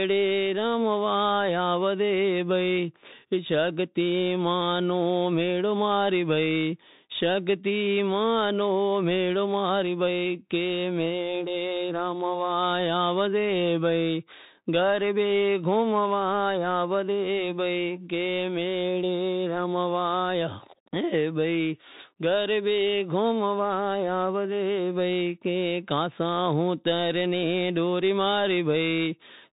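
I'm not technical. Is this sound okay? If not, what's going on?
No. The speech passed through a Bluetooth CVSD headset codec, the basic link headsets use for phone calls, and the damage is plainly audible for the whole clip. This codec only tracks whether the signal goes up or down, in small steps, and drops everything above 4 kHz. So the speech sounds narrow and muffled like an old phone line, s sounds turn scratchy, loud sharp sounds distort, and a grainy hiss runs underneath throughout.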